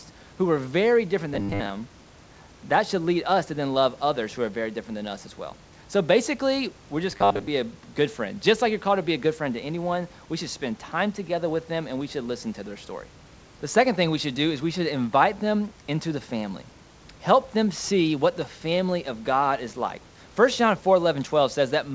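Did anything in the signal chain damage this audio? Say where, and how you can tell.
Yes, at the buffer stage: robotic sound from repeated short buffers, 1.34–1.70 s after "who were very different" and 7.11–7.47 s between "basically we're" and "a good friend". A fixed 100 Hz buzz points to a 10 ms block being replayed, likely from late-arriving audio. On a waveform this shows as roughly repeating 10 ms cycles, and on a spectrogram as rigid harmonics spaced 100 Hz apart.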